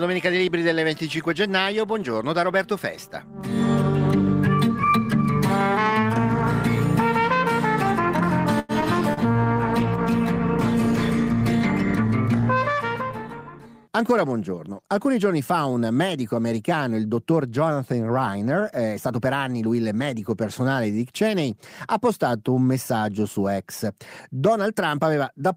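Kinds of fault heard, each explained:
Short stall from a late packet: a packet arrived late, so the receiver held the last sound from 8.59 to 8.72 s, about 96 ms, then resumed where it had stopped. On a spectrogram a frozen, repeated stretch appears; the waveform shows near-identical cycles with a slight dip.
Short concealed packet loss: audio never reached the decoder in time at 8.81 s and again at 9.14 to 9.20 s, 40 ms each, and the receiver patched the gaps by extrapolation. Expect a brief smear or wobble, with blurred harmonics and a short discontinuity in the waveform.
Call bitrate drop: from 9.01 to 12.79 s the encoder's budget fell from 32 to 18 kbps, staying at its lowest for about 2.66 s. The sound turns coarser and rougher. A spectrogram shows blotchy, less detailed energy and weaker upper-band texture.
Jitter buffer slow-down: from 9.26 to 9.54 s the receiver rebuilt its reserve by repeating single pitch periods, adding 43 ms and playing at 87% speed with pitch unchanged. 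The waveform shows duplicated cycles, and spectrogram features stretch sideways while harmonic spacing stays put.
Jitter buffer speed-up: from 13.07 to 13.88 s excess buffered audio was trimmed by cutting short pitch-period pieces, roughly 70 ms in total, running at 108% speed with pitch intact. It sounds hurried. Spectrogram events sit compressed in time, and the waveform shows small splice points.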